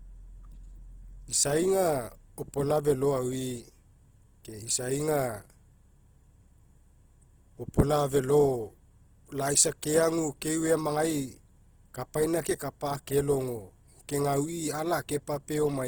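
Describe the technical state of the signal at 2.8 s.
At 2.8 s you're hearing the same damage that runs through the whole clip: Opus compression, likely at a low bitrate, something like 16 kbps. The speech has that rough, grainy texture where the encoder, short on bits, fills the bands with folded or noise-like content rather than leaving gaps, so there's little swirl but plenty of grit. It's plainly audible, and the bandwidth hasn't narrowed, with content reaching up to about 20.1 kHz.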